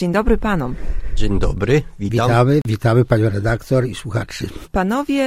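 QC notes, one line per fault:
2.62–2.65 s, gap at a join of encoded pieces: two separately encoded segments were joined without trimming, so encoder start delay and final-frame padding remain. This cuts a 37 ms gap into continuous sound, with codec-smeared edges that leave a shorter silent part, before the sound resumes where it stopped.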